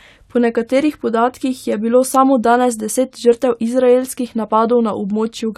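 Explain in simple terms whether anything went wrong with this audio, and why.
Nothing went wrong here: no glitches, dropouts or distortion turn up anywhere in this recording of speech, so there's nothing to fix.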